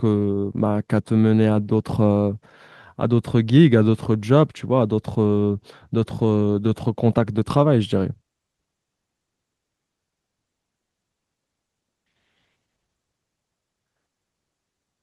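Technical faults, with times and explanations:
No technical faults can be heard in this speech clip. It has passed through a WebRTC call path, whose codec leaves the top end rolled off at about 12 kHz, which fits Opus running at around 32 kbps.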